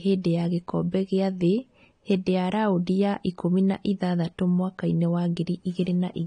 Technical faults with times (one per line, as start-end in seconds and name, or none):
0.00-6.26 AAC compression